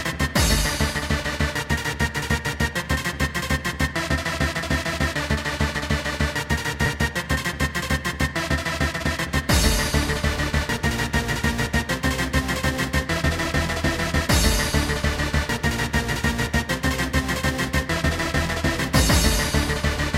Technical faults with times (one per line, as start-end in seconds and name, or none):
8.89-9.09 jitter buffer speed-up